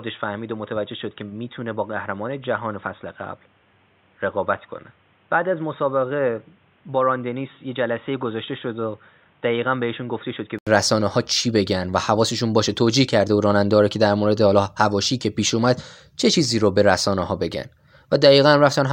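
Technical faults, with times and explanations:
0.00–10.67 s, input switched to a poorer device: the recording likely began on a lesser microphone or a headset's call profile before moving to the proper input. Until then the speech has nothing above 3.8 kHz, so it sounds dull and boxy, sits around 10 dB quieter, and carries its own background noise roughly 35 dB below the speech. At 10.67 s an 80 ms gap marks the changeover, after which the sound opens up.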